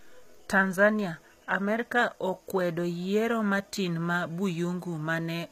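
A speech clip with plainly audible codec damage throughout: s sounds are gritty and lispy, and the treble is a rebuilt copy of lower bands, pointing to HE-AAC compression at a low rate of around 20 kbps. On a spectrogram the upper bands look smeared and blocky, with nothing above 14.9 kHz. From 0.10 s to 5.48 s there is a faint regular tick about every 50 ms, heard as a soft rattle. These are clock slip clicks, likely from two unsynchronised clocks differing by roughly 400 ppm, with one sample dropped or repeated at each slip. The waveform shows tiny single-sample steps at that steady spacing.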